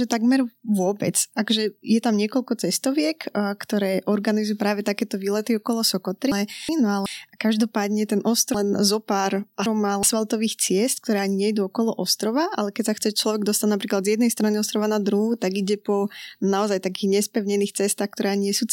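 At 6.32 to 7.06 s, chunks out of order: a 372 ms block of speech lands one chunk late, so two slices swap places. It happens again at 8.55 to 10.03 s, where a block arrives three chunks late, making a longer jumbled stretch.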